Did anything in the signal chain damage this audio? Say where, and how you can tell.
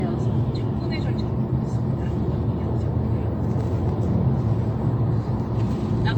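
Yes. The damage sits at the codec stage and runs through the whole clip. The sound is swirly and hollow, with smeared transients and blurred attacks, and there is nothing above 18.6 kHz. This is likely generation loss: the audio went through an AAC-style codec about four times, and each pass re-quantised it on a shifted frame grid, so the noise and spectral holes compounded. The result is worse than a single encode at a moderate bitrate would give.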